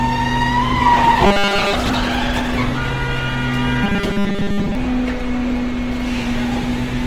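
Throughout, the sound is grainy and rough, with tones smeared into a noisy texture while the full bandwidth stays intact. This is Opus compression, likely in its music mode at a low bitrate near 16 kbps, where the encoder fills starved bands with folded or noise-like content.

From 1.26 to 1.74 s, and again from 3.84 to 4.75 s, the audio turns into a rigid, metallic buzz pitched at 200 Hz. This is robotic sound from repeated short buffers: a 5 ms slice is likely looped while most of the real audio in those stretches is skipped.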